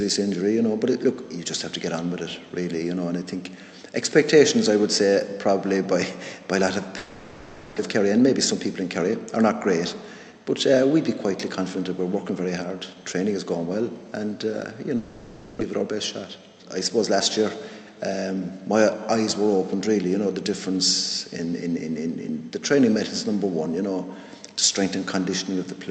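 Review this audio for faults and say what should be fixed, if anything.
Two long network dropouts occur, at 6.97 to 7.80 s and at 14.97 to 15.63 s. The stream likely stopped arriving both times. The receiver stretched the last sound into a fading buzz for about 0.81 s and 0.64 s. It never went fully silent. When the audio resumes, about 0.6 s of the original is gone in each gap. Prevention: use a more stable network route, or add redundancy or retransmission so short outages can be recovered.

A jitter buffer speed-up runs from 7.88 to 10.40 s, right after the first dropout. The buffer held more than its target. To shed that backlog, the receiver kept cutting out tiny pitch-period slices. Playback runs at about 107% speed with the pitch unchanged. It sounds hurried, and roughly a fifth of a second is trimmed away. Prevention: fix the network delay spikes so the buffer never has to drain a sudden backlog.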